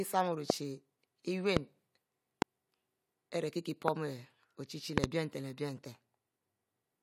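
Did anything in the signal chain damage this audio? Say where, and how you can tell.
Yes. Loud pops cut sharply through the speech at 0.50–0.52, 1.57–1.59, 2.42–2.44 and 3.88–3.90 s, and a double pop at 4.98–5.06 s just before "leh bie", each about 25 dB above the speech, which runs on underneath. This is likely a voltage spike in the analogue wiring or driver.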